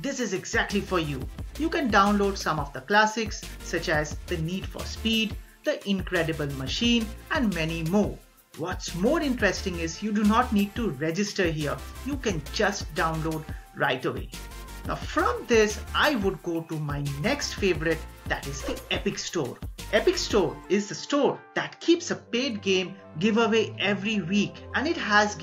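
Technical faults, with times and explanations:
Listening closely, nothing in the audio stood out as a technical problem.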